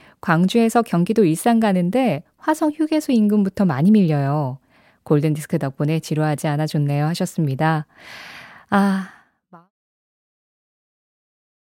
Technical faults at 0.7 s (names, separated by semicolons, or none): none